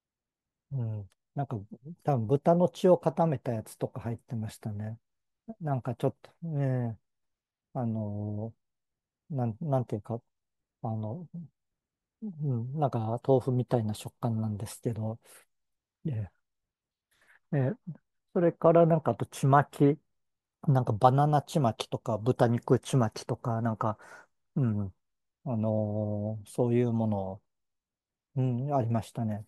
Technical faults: none

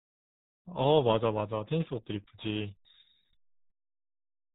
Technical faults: RealAudio 14.4 codec

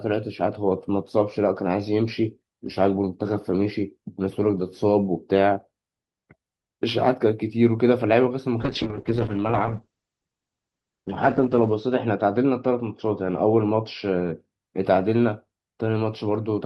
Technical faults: call bitrate drop

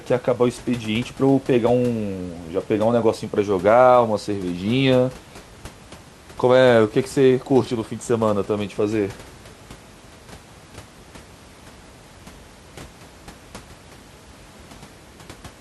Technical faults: none

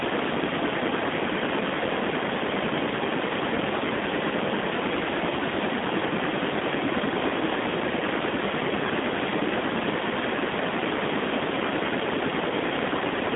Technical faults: G.729 codec

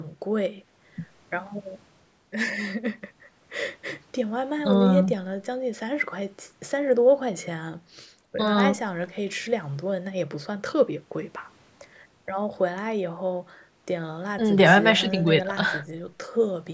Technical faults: none

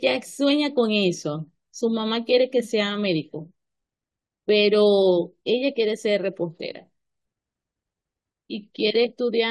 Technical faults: none

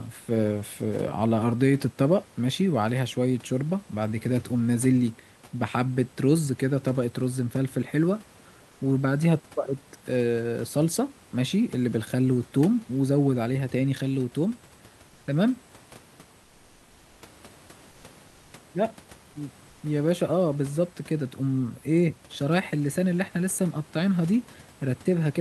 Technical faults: comfort noise in place of the background

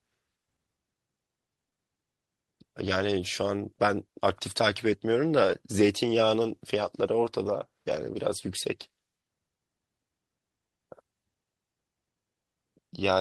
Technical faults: short concealed packet loss; lost packet rebuilt from error correction

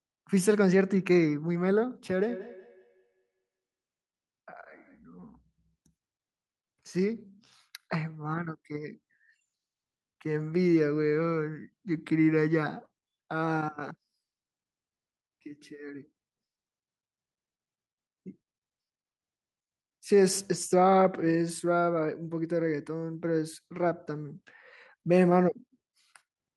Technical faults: feedback echo between two devices

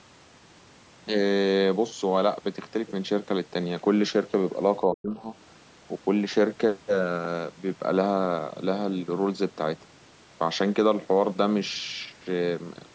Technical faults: speech suppressed in double talk

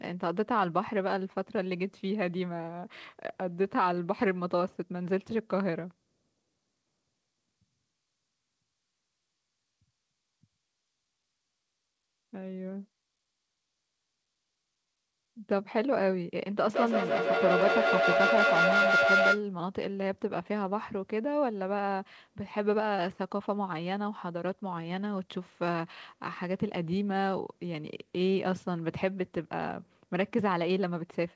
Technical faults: feedback howl

